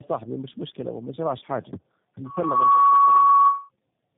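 Across the whole clip, the call has passed through several speech codecs in turn. This is tandem speech coding, with each stage re-encoding the previous one's losses. The speech sounds rough, muffled and warbly, with nothing above 3.7 kHz. That fits a chain of perhaps three coders such as G.729A and AMR-NB.

From 2.23 s to 3.69 s, just after "مش مشكلة ومجراش حاجة", the microphone picks up its own loudspeaker and the loop gain exceeds one at 1.1 kHz. This produces a loudspeaker feedback squeal. A single tone swells within less than half a second to about 15 dB above the speech, then holds until it stops.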